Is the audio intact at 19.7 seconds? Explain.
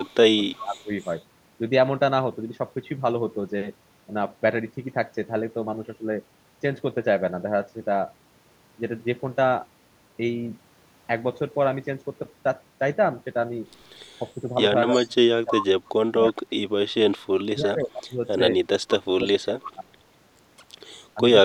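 No. The talker's speech is being pulled down from 14.42 to 19.94 s, dipping as deep as roughly 30 dB over about 3 s in total. This is speech suppressed in double talk, likely an echo canceller ducking its own talker along with the loudspeaker echo while both sides spoke. The level dips, thins or cuts out in pieces. Within that span, from 19.64 to 19.72 s, an echo leak adds a faint copy of the voice, arriving 319 ms late and roughly 15 dB down. It likely comes from loudspeaker pickup the canceller failed to remove. Unlike room reverb, it is a distinct delayed repeat, not a smooth tail.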